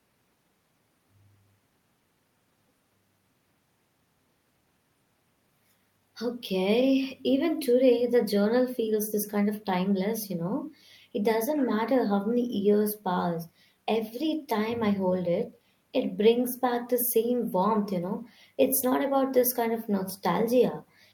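Nothing technically wrong turns up anywhere in this speech recording, so there's no fault to point to and nothing to time or trace back to a cause.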